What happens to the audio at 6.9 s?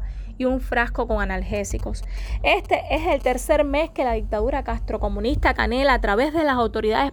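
Nothing goes wrong at 6.9 s; the audio plays through that moment intact, with no dropout, click, glitch or distortion.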